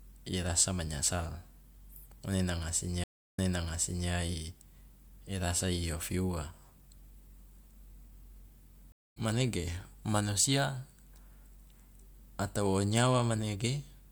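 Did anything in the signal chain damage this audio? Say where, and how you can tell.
Yes, two stream reconnects at the network stage. At 3.04 s, after "ngone nanga", 315 ms of silence, then the speech resumes 0.74 s earlier, repeating audio before "i rasa i ofi". At 8.92 s a 190 ms gap resumes slightly later. Each time the connection dropped and a fresh decoder restarted mid-stream.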